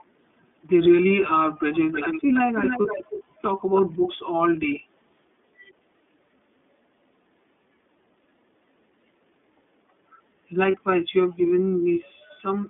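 Speech throughout sounds narrow and slightly rough and synthetic, with nothing above about 3.5 kHz or below about 200 Hz. That is the iLBC codec. Its damage is plainly audible, and the rate points to its 13.33 kbps mode, which codes each 30 ms frame on its own. From 1.92 to 3.23 s, and again briefly at 3.74 to 3.82 s, a fainter copy of the voice trails it by 315 ms, somewhat quieter than the speech. This echo leak is likely a loudspeaker at the far end whose echo canceller let some of its own microphone pickup back into the line. At 2.82, 10.71 and 12.26 s a short, held, faintly buzzy sound replaces about 30 ms of speech. These are lost iLBC frames, one frame each. The decoder filled each gap by repeating the last pitch cycle with noise and recovered immediately on the next frame.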